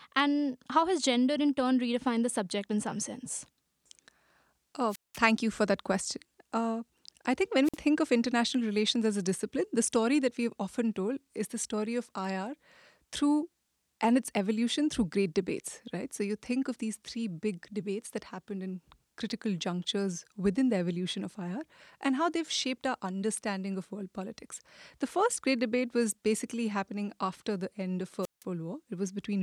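Three wireless microphone squelch dropouts break up this speech. From 4.88 to 5.20 s a short swell of hiss gives way to a silent gap of about 190 ms before "you for that question". From 7.64 to 7.78 s, after "I think when", a briefer 50 ms mute precedes "of international relations as". From 28.22 to 28.44 s, following "after the end of", the output goes silent for about 170 ms. Each time the radio signal fades far enough that the receiver's squelch shuts the output off. The rising static just before each hole is what separates this from a digital packet dropout, which cuts out abruptly with no noise build-up.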